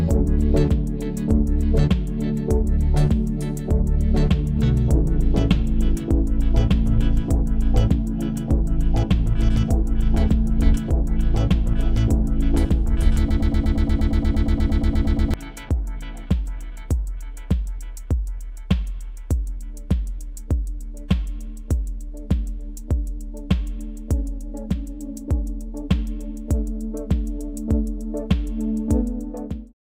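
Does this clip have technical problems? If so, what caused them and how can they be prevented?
Yes. From 13.31 to 15.34 s there is a broken-record loop: a 118 ms fragment repeats 17 times back to back, and the audio that belonged there is lost. A stalled player or stream resending its last fragment is the likely cause. On a waveform, identical blocks tile evenly. A spectrogram shows a repeating pattern with vertical seams every 118 ms. Adequate buffering and stall detection that mutes or resynchronises, rather than repeating old data, would prevent it.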